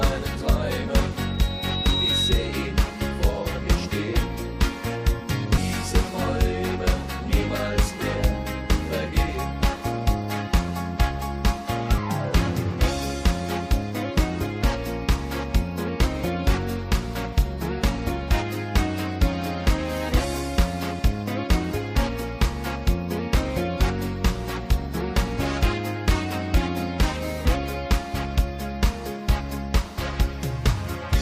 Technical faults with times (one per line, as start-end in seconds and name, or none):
1.17-2.72 loudspeaker feedback squeal
5.56-5.58 damaged data in a compressed stream
11.97 damaged data in a compressed stream